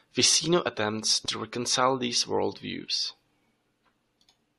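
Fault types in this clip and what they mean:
No faults can be heard.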